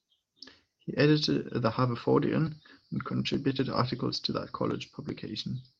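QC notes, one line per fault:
No faults detected.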